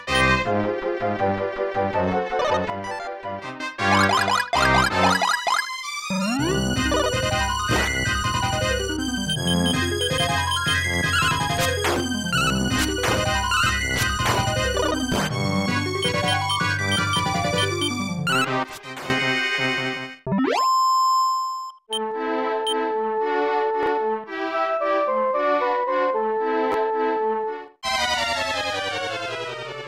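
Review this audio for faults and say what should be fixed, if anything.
Sudden gain jump, 2.7 to 3.6 s and 18.64 to 19.1 s. The level drops abruptly, by about 8 dB in the first case and about 12 dB in the second, with the background noise falling along with the sound. It then returns after each span. The step arrives between adjacent samples with no fade, which likely means a gain setting or bit shift was applied instantly rather than ramped. Apply gain changes through a short smoothing ramp.

Chunks out of order, 23.83 to 23.87 s and 26.72 to 26.74 s. Short blocks of about 10.67 ms play in the wrong place: at 23.83 s a block sounds three blocks late, and at 26.72 s one block sounds one late. No audio is missing, but the reshuffled order and the hard joins at each boundary make a brief jumbled moment. Enforce sequence ordering in the buffering or write path.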